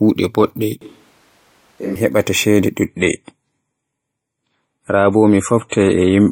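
A speech recording with two separate faults. From 0.81 to 1.96 s the sound suddenly turns roomy and hollow, with thinner bass. The level falls by about 10 dB, and room noise rises to roughly 30 dB below the speech. Then it snaps back. This is likely a switch to a distant microphone: the close microphone dropped out, and a farther pickup carried the room along with the voice. From 2.86 s to the end, quality drops abruptly with no gap. The treble is cut, with nothing above 11.4 kHz. Codec artefacts grow. This is an adaptive stream at a lower bitrate, switching to a lighter version of the same stream. The sound points to a step down from about 128 kbit/s MP3 to about 32 kbit/s.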